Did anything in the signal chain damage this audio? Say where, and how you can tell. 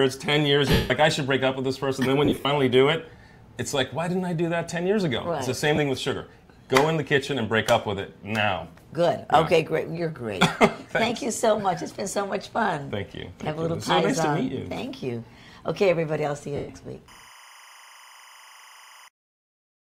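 Yes. At the Bluetooth link, lost LE Audio frames leave smeared gaps at 0.72–0.91 s (180 ms), 2.25–2.45 s (140 ms scattered, longest run about 50 ms), 5.76–5.78 s and 16.56–16.69 s. The LC3 decoder refills each gap by replaying the last spectrum with randomised signs, fading after a few frames. That noisy smear, rather than clean silence, separates it from a plain dropout.

In the analogue wiring, timecode bleed runs from 17.08 to 19.08 s: a chirping warble switching between pitches around 1 kHz and 2 kHz, about 25 dB below the programme and fitting 25-frame code. This octave-pair flip distinguishes it from mains hum's fixed low harmonics. Only light codec texture accompanies these.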